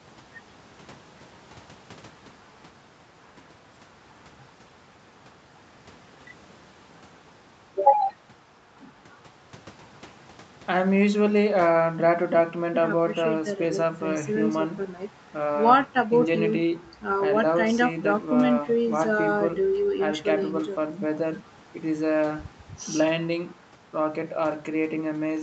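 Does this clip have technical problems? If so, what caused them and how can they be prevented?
No, there's nothing wrong in this speech clip; it just has the usual narrowed sound of a call, with the microphone processing trimming the deepest bass and the codec leaving nothing above about 8 kHz, which is normal for this kind of path.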